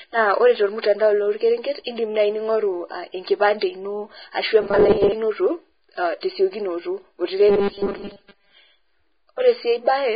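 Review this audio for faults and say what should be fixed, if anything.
Hissy, grainy speech runs through the whole clip, with roughened tones, smeared onsets and nothing above 4.9 kHz. This is likely Vorbis compression at a low setting, consistent with a bitrate near 15 kbps. The treble is coarsely quantised into noise and the band-limit lowered. Encoding at a higher quality or bitrate would prevent it.

From 4.61 to 5.12 s and again from 7.49 to 8.54 s, the speech turns into a rigid, metallic 200 Hz buzz that tracks the original only loosely. This robotic sound from repeated short buffers likely comes from playback repeating the last 5 ms whenever fresh audio arrives late, so most of each span is repetition while the real audio is skipped. Larger buffers or a more reliable audio feed would stop these dropouts.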